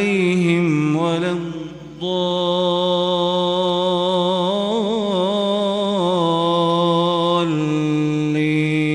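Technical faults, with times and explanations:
No technical faults are audible.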